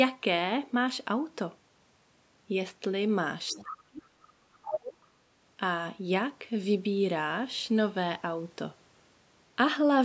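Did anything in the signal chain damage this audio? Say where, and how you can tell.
Yes, in the call-processing stage. A second voice, in short scraps, leaks through at 3.5 to 3.63 s, about 20 dB below the talker, and again at 4.63 to 4.78 s, only about 5 dB down. It is other side's voice leaking through, likely residual loudspeaker echo the canceller failed to subtract. Crosstalk in wiring would be steady, not broken into fragments.

The talker's own speech is also suppressed in double talk. Deep level drops of about 40 dB run from 3.53 to 4.57 s, and about 35 dB from 4.77 to 4.98 s, each overlapping those leaked scraps. This is likely a canceller unable to separate the two voices turning both down. Because the dips follow the far voice, they are not network dropouts, and the band still reaches 8 kHz.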